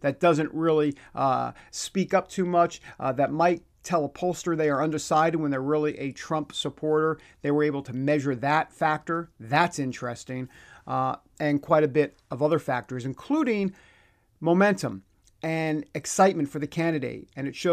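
No technical faults are audible.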